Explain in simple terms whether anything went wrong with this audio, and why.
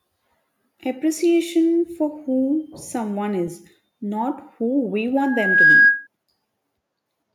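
From 5.17 to 6.07 s, a shrill 1.6 kHz whistle swells up over the speech. This is loudspeaker feedback squeal: the microphone picks up its own loudspeaker and re-amplifies it.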